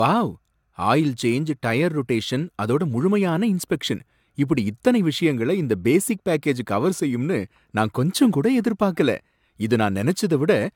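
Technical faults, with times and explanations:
Throughout, generation loss: speech sounds swirly and hollow with blurred attacks and nothing above 17.1 kHz, more smeared than one AAC pass near 96 kbit/s, likely from a few repeated encodes.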